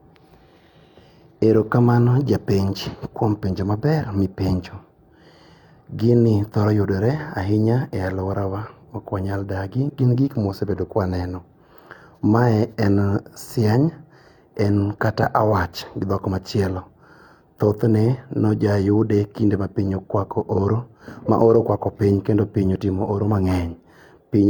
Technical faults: none

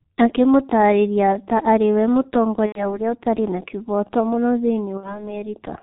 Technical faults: G.723.1 codec; VoIP packet loss concealed by the speech codec

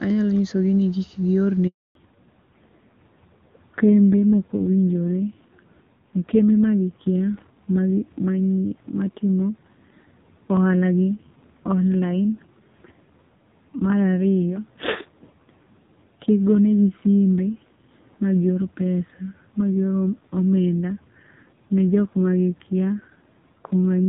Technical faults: handover gap; fallback to narrowband

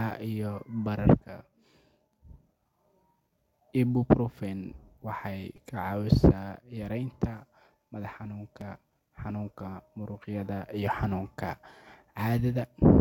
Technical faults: repeated buffer

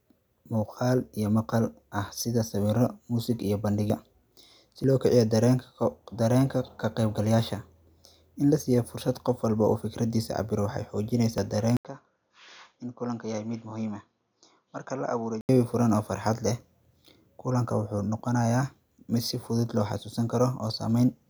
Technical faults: dropped buffer (overrun); input switched to a poorer device

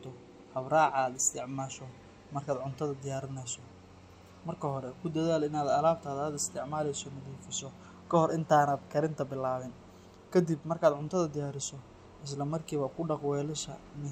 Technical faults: none

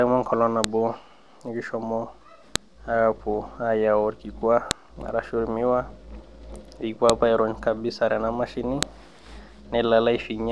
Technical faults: file header played as audio

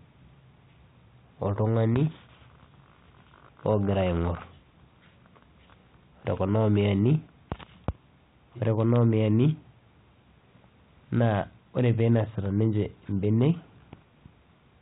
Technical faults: none

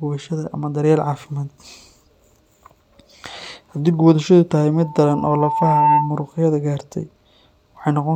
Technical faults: loudspeaker feedback squeal

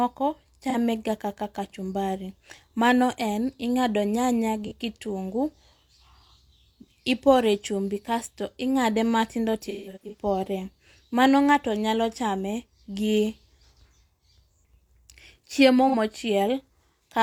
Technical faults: AAC frame loss with concealment

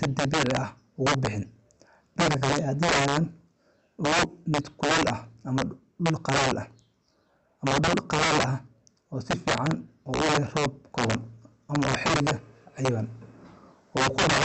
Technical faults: integer overflow; clock drift between sender and receiver; repeated timing corrections

